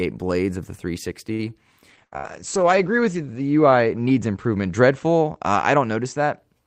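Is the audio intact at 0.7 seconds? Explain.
Yes, at 0.7 seconds the speech runs on without any audible dropout, click, distortion or other technical fault.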